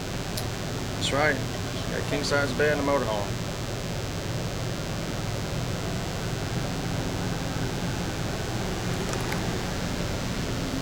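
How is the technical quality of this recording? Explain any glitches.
A thin, steady buzz sits under the sound for the entire recording, fairly loud and not far below the main audio. This is DECT cordless phone buzz: a nearby handset or base emits a radio burst 100 times per second, which the audio circuitry rectifies into a 100 Hz tone rich in harmonics.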